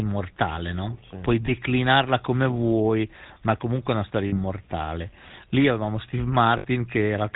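The speech has passed through the GSM full-rate codec, whose roughly 13 kbps character can be heard throughout. It models the vocal tract and drives it with a sparse, regularly spaced pulse excitation that keeps only a third of the samples, with nothing passed above 4 kHz. The damage is plainly audible: the voice is dull at the top, with a buzzy, gravelly roughness.

Lost GSM frames occur three times, and each time the decoder covers the gap by reusing the last good frame's settings. From 1.46 to 1.51 s the gap fits a single 20 ms frame, giving a brief metallic smear. From 4.28 to 4.37 s, right after "comunque è una storia", the loss fits about 40 ms, and from 6.58 to 6.66 s about 60 ms. Both are held as a rough, metallic ring rather than carrying the speech forward.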